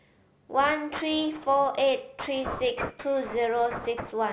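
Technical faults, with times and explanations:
throughout, aliasing: the rate was reduced with no anti-alias filter, which fits 16 kHz to 8 kHz, so speech above 4 kHz folds back about 10 dB down, making sibilants gritty and metallic.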